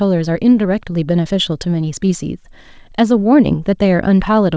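From start to finish there is clock drift between sender and receiver: the sending clock runs roughly 4 percent fast, so the receiver's jitter buffer keeps overfilling rather than draining. From 0.15 s to 4.54 s, repeated timing corrections trim short pieces to keep pace with the 104 percent rate. They are small, unevenly spaced edits, not the clean gaps of packet loss. All of this passes through a call path whose band stops at 8 kHz, which fits a G.722 codec.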